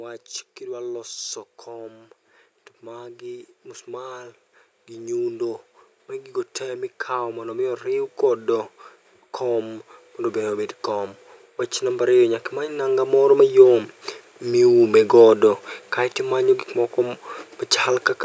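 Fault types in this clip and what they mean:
Automatic gain rising: The gain control judged the input too quiet and kept turning it up. From 0.59 s to 14.81 s, the speech and background noise swell together, climbing by about 21 dB. The rise is slow and steady, not a jump.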